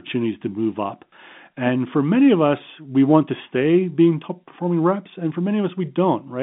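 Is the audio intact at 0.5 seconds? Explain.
Yes, the speech at 0.5 seconds is intact, carried on the narrow telephone band of G.711 coding.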